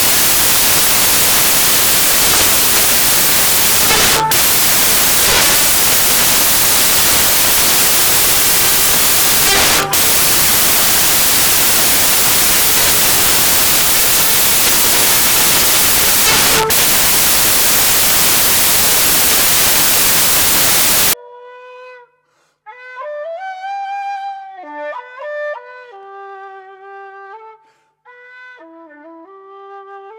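From the start to about 21.13 s the audio suffers from samples built from the wrong bytes. The reader assembles each sample with its bytes misaligned or in the wrong order, so the rapidly fluctuating low-order bits land in the most significant position. The result is loud, harsh broadband noise, close to white on the louder passages. After 21.13 s the samples decode correctly.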